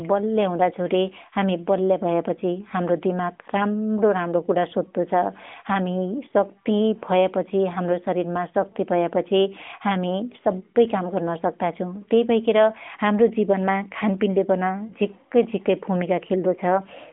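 At 14.88 to 14.94 s, just after "हाम्रो जीवनमा खानपिनले पन", the speech gives a brief dip or warble, then returns weak for a moment. This is a lost AMR speech frame: a single 20 ms frame failed its checksum, and the narrowband decoder filled the gap by reusing the previous pitch and vocal tract settings at falling gain.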